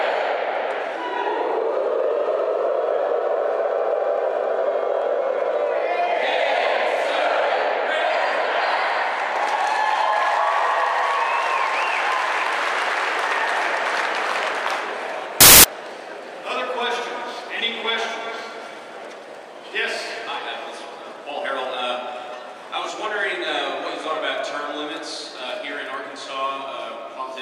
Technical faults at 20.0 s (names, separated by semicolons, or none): none